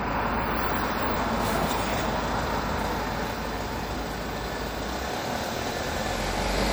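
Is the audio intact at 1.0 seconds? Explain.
No. At 1.0 seconds, as throughout the clip, the sound is watery and swirly, with smeared attacks. This is likely MP3 compression at a bitrate that points to about 64 kbps: the encoder drops weak frequency lines that flicker between frames.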